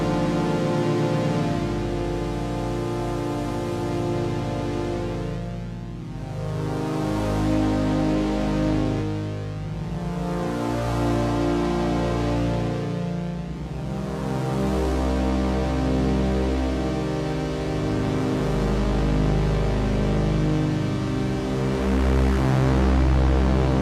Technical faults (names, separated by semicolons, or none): none